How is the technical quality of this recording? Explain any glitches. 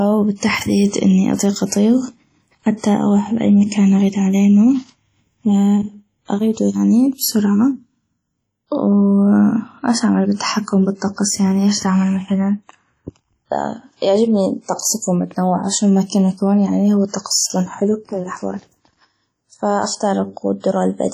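The quality is poor, with heavy coding damage across the whole recording. WMA compression, throughout: the speech has a ringing, washy quality and a hiss that swells and fades with the signal. The likely cause is a block-based transform codec at a low bitrate, which fits around 32 kbps. Its coarse quantisation smears noise over tens of milliseconds around each sound and drops weaker spectral detail entirely.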